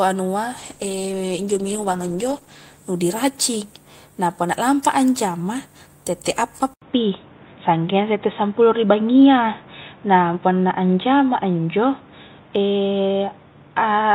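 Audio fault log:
0.58–4.19 s, call bitrate drop: the encoder falls from 48 to 13 kbps and stays at its lowest for about 2.05 s, so the speech turns rough and muffled with the top end gone. A spectrogram shows the upper band cut off and smeared harmonics until recovery just before "na punna lampa a".
6.74–14.14 s, input switched to a poorer device: after "a anjama tette appa" an 80 ms gap appears, then the speech turns dull and boxy to the end, likely from a change to a narrower-band microphone. A spectrogram shows nothing above 3.8 kHz and a new noise floor roughly 30 dB down. The waveform level steps by about 5 dB.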